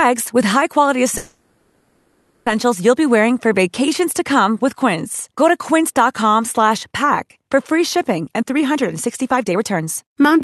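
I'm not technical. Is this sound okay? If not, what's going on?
No. There are two problems, both typical of audio sent over a live call.

From 1.17 to 2.48 s there is a call audio freeze. The last bit of sound is stretched into a fading buzz or hiss for about 1.3 s, and then the speech picks up exactly where it left off. Nothing is lost, but a pause has been inserted. The likely cause is that packets of audio were held up in transit, leaving the receiver's jitter buffer empty while it waited.

From 8.21 to 10.38 s, just after "for free", there is a jitter buffer speed-up. The receiver had built up extra delay and worked it off by snipping out many tiny slices of the speech in quick succession. The speech plays about 24% faster at the same pitch and sounds rushed. Roughly half a second of audio is trimmed away over that stretch.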